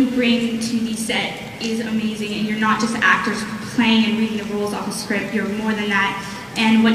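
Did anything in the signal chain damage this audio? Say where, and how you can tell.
No, nothing in the signal chain stood out as a problem on listening.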